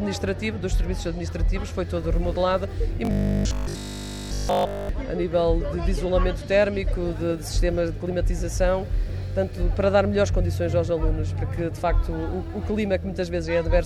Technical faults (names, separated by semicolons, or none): robotic sound from repeated short buffers